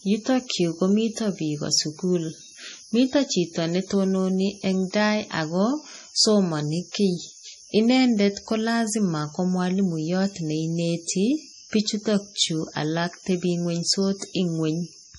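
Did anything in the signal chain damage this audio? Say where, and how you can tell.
Yes, the codec stage: heavy MP3 compression throughout the speech, with nothing above 11.4 kHz and watery, swirly smearing, likely from a low bitrate around 32 kbps.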